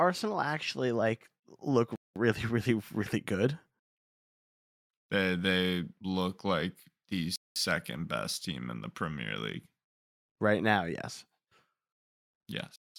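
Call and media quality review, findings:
Gap between chunks: hard-edged 200 ms silences at 1.96–2.16 s (after "actually like look"), 7.36–7.56 s (before "best team in the") and 12.76–12.96 s. Probable component: chunked transport or player scheduling, which fits 2.5 s chunks, with each chunk starting late or padded. Unlike a dropout, no speech is missing. The sound pauses and resumes intact, at identical lengths and a steady 5.4 s spacing.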